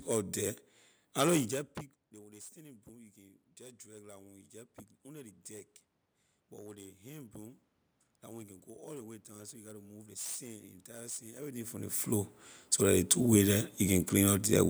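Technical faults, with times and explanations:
2.53–5.78 s, automatic gain rising: after the talker moves back around 1.5 s, the input falls by about 22 dB, so the gain control slowly adds about 5 dB over three seconds, and the voice and room noise swell together.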